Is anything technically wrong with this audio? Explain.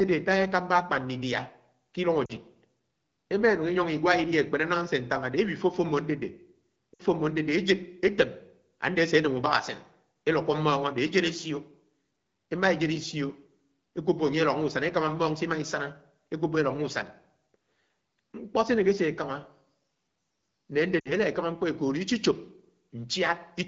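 Yes. The speech has three short gaps from lost AMR speech frames, at 2.26 to 2.32 s, 6.93 to 7.02 s and 21.00 to 21.13 s. Each runs about 40 to 60 ms, which fits two or three lost 20 ms frames. When a damaged frame arrives, the wideband decoder repeats its last good pitch and vocal tract parameters with the gain turned down. Each gap therefore sounds like a brief smeared warble that fades before the speech comes back weak or rough for a moment. On a waveform this is a short run of repeated cycles whose envelope narrows. A spectrogram shows the harmonics held flat and fading, then a weak onset. The AMR-WB coding itself, which sounds like a 12.65 kbit/s rate, adds only light damage.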